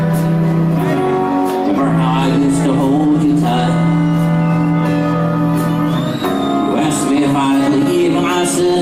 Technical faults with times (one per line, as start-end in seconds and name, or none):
none